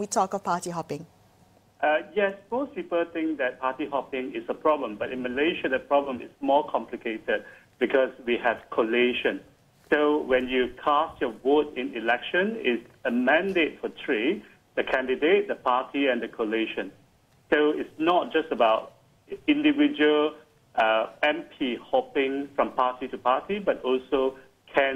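No technical faults are audible.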